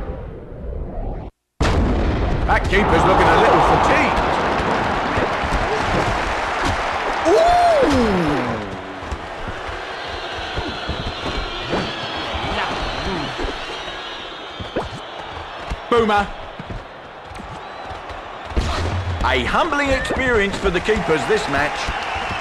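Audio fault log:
No faults found in this audio.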